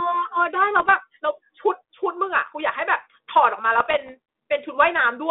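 Bit errors on an ADPCM link hit the speech from 0.76 to 0.91 s and from 3.77 to 4.10 s. At a rate of roughly half a percent, flipped bits derail the decoder's predictor and step size, giving pops and rough bursts. On a waveform these show as spikes and jumps in level. On a spectrogram they appear as broadband vertical streaks, held inside the 150 Hz to 3.6 kHz telephone band.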